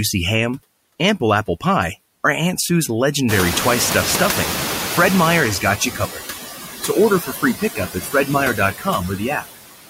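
Noise suppressor artifacts run through this speech clip: the suppressor pulls about 13 dB out of the bands it reads as steady noise, frame by frame, so the background dips between phrases and swells under the speech. Noise suppressor catching up follows from 3.28 to 5.85 s. The room noise jumps by about 20 dB at around 3.5 s, settling only about 7 dB below the speech, and the suppressor's noise estimate lags behind it. The louder background therefore comes through with less reduction at first, then sinks over roughly 2.6 s until the cut reaches about 9 dB. Speech cut by the noise suppressor appears three times, at 5.8–6.25 s, 7.2–8.28 s and 8.78–8.87 s, where the suppressor mistakes parts of the speech for noise. Soft consonants, word endings and quieter stretches are pulled down with the background, by up to about 11 dB, 14 dB and 13 dB respectively, so they sound swallowed or faint. About half a second of the middle span is affected, and brief moments in the other two.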